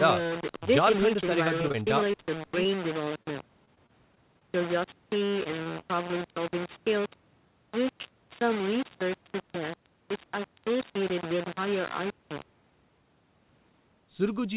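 From start to finish the speech carries a coarse, grainy distortion that shifts with the sound. The quietest moments break up into sputtering or drop to silence, and the grit sits only roughly 10 dB below the signal. The likely cause is low bit depth without dither: the audio was rounded to very few levels, which fits about 4 bits. With no dither to decorrelate it, the rounding error tracks the waveform instead of forming a steady hiss. The band also stops at 4 kHz, consistent with a G.711 mu-law call path.

Between 1.62 and 4.43 s the sound turns choppy, with small pieces dropping out in quick succession. This is repeated packet loss, heard as robotic sound. Thirteen separate holes fall in this stretch, the longest 26 ms, covering about 8 percent of it. Each hole was patched by extending the preceding sound, but the next one arrived before the audio could settle, so the patches run together into a mechanical texture.

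Three brief smears follow in close succession, at 5.43–5.48 s, 5.64–5.68 s and 5.80–5.84 s. Each is a small wobble lasting about 20 ms. These are short concealed packet losses. In each, a single stretch of about 20 ms failed to reach the decoder in time. The receiver bridged it by continuing the last sound, then blended back into the real signal, leaving a momentary blur rather than a clean gap.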